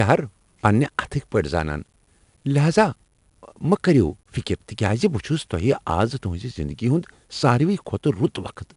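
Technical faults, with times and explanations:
Throughout: 4-bit ADPCM compression. A gritty hiss rides on the speech and swells with every loud syllable. Each sample is coded as a small step from a predicted value, so the error tracks the signal level. Sharp consonant attacks sound rough because the adaptive step lags behind sudden jumps. Nothing is heard above 10.6 kHz, which fits a sample rate near 22 kHz and a rate of about 88 kbps, giving the speech a dull top.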